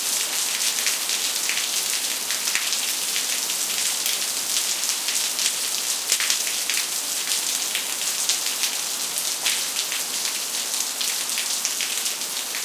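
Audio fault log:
No technical faults detected.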